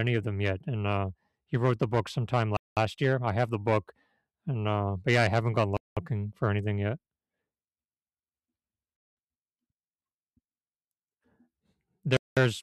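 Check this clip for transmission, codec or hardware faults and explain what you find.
The speech has a gap between chunks fault. The audio arrives in 3-second blocks, and each join inserts 200 ms of silence. This happens between "wrote the book sometime" and "year I have the" (2.57–2.77 s), between "yeah I haven't gone" and "for anything yet" (5.77–5.97 s), and at 12.17–12.37 s.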